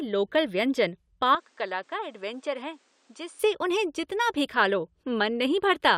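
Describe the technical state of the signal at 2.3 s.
At 2.3 s the signal sits inside an input switched to a poorer device, running from 1.35 to 3.39 s. The recording likely changed over to a lesser microphone or a headset's call profile, so the speech loses everything above 9.8 kHz and sounds duller and boxier. The level falls by roughly 10 dB, a new noise floor appears about 35 dB below the speech, and the change happens without any gap at either end.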